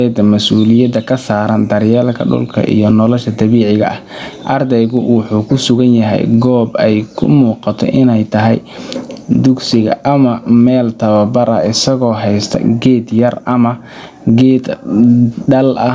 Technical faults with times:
0.00-15.94 gain pumping

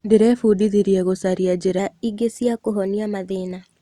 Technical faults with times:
1.79-3.80 wrong sample rate

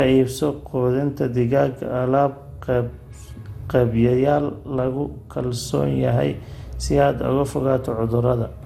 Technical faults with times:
0.00-8.65 generation loss

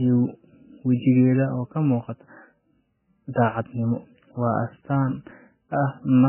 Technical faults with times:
0.00-6.29 MP3 compression

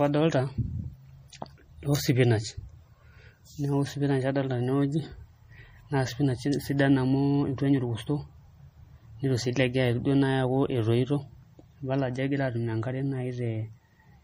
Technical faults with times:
0.00-14.23 MP3 compression

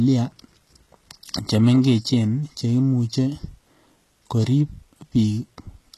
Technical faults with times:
0.00-5.97 HE-AAC compression

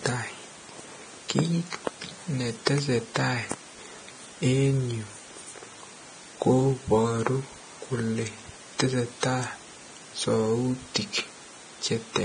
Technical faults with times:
0.00-12.25 Vorbis compression

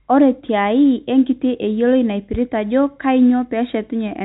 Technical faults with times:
none

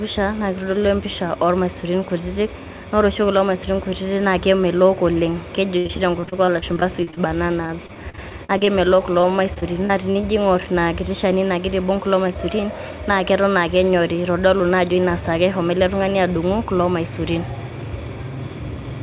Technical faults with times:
5.78-7.18 repeated packet loss (robotic sound)
7.66-8.69 repeated packet loss (robotic sound)
9.21-10.25 repeated packet loss (robotic sound)
12.27-13.06 jitter buffer speed-up

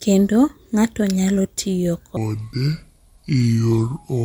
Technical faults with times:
2.17-4.24 section at the wrong speed

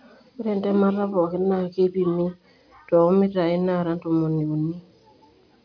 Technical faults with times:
none

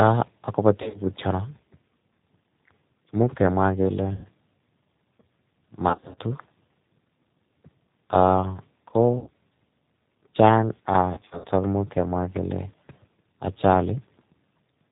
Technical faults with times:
0.00-14.91 G.729 codec
0.82-1.01 VoIP packet loss concealed by the speech codec
4.13-4.26 VoIP packet loss concealed by the speech codec
5.89-6.18 VoIP packet loss concealed by the speech codec
9.19-9.30 VoIP packet loss concealed by the speech codec
11.14-11.46 VoIP packet loss concealed by the speech codec

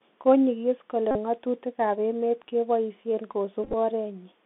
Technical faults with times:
0.00-4.45 Bluetooth CVSD headset codec
1.11-1.17 Bluetooth headset packet repeated
3.64-3.74 Bluetooth headset packet repeated

